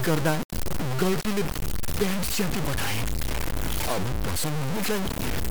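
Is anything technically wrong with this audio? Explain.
Yes. Throughout the speech there is low bit depth without dither. The signal was likely truncated to very few amplitude steps, consistent with about 3 bits, so the error tracks the speech, nearly as loud as the speech itself. It sounds coarse and grainy, with quiet stretches sputtering or dropping out.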